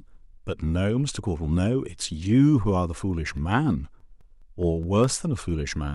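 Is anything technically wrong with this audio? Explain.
Yes. The speech carries CD scratch ticks from 3.37 s to 5.04 s: nine short clicks at a steady rate of about five per second, the longest lasting only a few milliseconds. The pattern points to a scratch on the disc surface that ruins more data on each revolution than error correction can recover. The player then interpolates across or mutes the lost samples, leaving a regular string of tiny ticks and momentary gaps over the speech.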